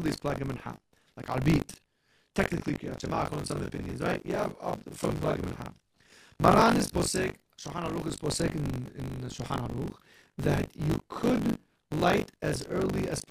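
Buffer tearing throughout: writer and reader cross each ring-buffer period, splicing in roughly a third of older audio, so speech carries a 50 Hz robotic rattle.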